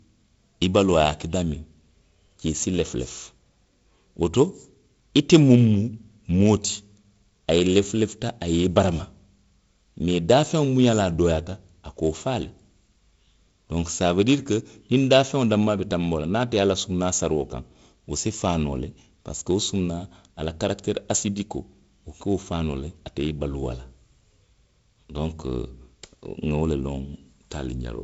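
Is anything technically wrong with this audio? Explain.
No, nothing in this audio is technically wrong.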